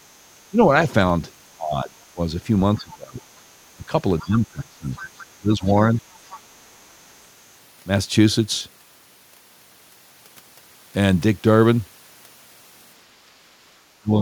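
Speech suppressed in double talk first appears at 0.5–0.59 s and again at 1.57–2.19 s. The voice dips by about 10 to 15 dB, likely because the echo canceller treated simultaneous talk as loudspeaker echo and turned everything down.

The other side's voice leaking through at 2.76–3.41 s arrives with a deeper suppression at 2.77–3.23 s. A faint second voice sits about 25 dB under the talker, likely residue the canceller failed to subtract from the microphone, while the main voice drops about 20 dB.

From 3.76 to 5.93 s suppression returns at about 20 dB. The leak reappears as a brief scrap at 4.19 s and then more steadily at 4.96–6.4 s, about 20 dB down.

A final suppression at 14.01–14.2 s dips the voice about 20 dB.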